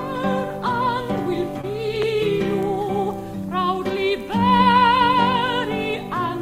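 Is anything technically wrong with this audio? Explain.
Yes. Short concealed packet loss at 1.61–1.65 s and 4.57–4.61 s: about 20 ms of audio arrived too late, so the decoder extended the preceding music, leaving a brief smear or wobble.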